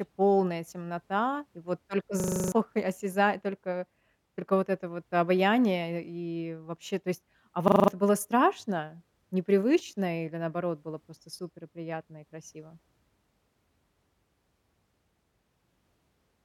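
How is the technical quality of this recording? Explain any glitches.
Two glitches break up the speech, both a system hang loop. From 2.2 to 2.52 s, just after "темнота и вот только", the sound turns into a rapid rattling stutter at 25 Hz before resuming with "и осяза только только". It recurs from 7.68 to 7.88 s, ending just before "было страшно непривычно или". A frozen driver left the hardware replaying the same 40 ms buffer, eight times and then five, so roughly a third and a fifth of a second of real audio are lost.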